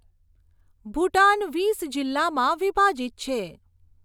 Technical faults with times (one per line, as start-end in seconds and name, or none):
none